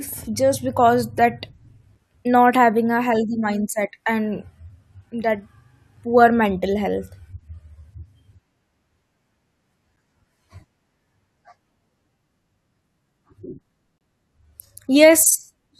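It's a speech clip with four short dropouts from gaps between stream segments. The sound cuts to hard-edged silence at 1.95 s, just before "not having a healthy", at 5.97 s, just before "poor mental", at 9.97 s, and from 13.98 to 14.01 s. They land every 4 s, which matches the segment boundaries. Each time the timestamps leave a hole (about 7, 5, 10 and 26 ms) and the player fills it with silence. No audio is actually lost.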